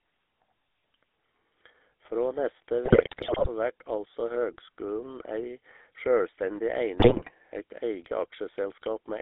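Throughout, the speech carries the buzzy, gravelly roughness of the GSM full-rate codec, plainly audible and consistent with 13 kbps coding. The band sits at about 300 Hz to 3.6 kHz. Unlike bursty network damage, this coarse pulse-driven excitation colours every syllable evenly. From 2.84 to 3.49 s, and again from 6.98 to 7.31 s, GSM bit errors corrupt the decoder's filter, pitch and gain values, so frames squawk, pop and gargle with sudden level jumps. Packet loss would instead leave gaps or smeared repeats.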